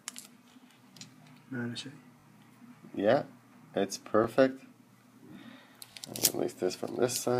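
At 0.52–0.54 s, 2.2–2.24 s, 4.24–4.26 s and 5.92–5.96 s, a repeated buffer causes a brief buzzy stutter. A slice about 20 ms long, which fits a 20 ms buffer, replays once, and twice at 2.2 and 5.92 s. Each replay has a hard join. Unlike a dropout, there is no silent gap and essentially no audio is lost.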